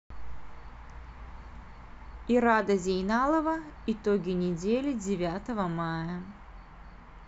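Throughout the speech, a block size mismatch (truncated) discards each block's tail, producing a steady 46.9 Hz buzz that fits 1024-sample blocks, at normal pace.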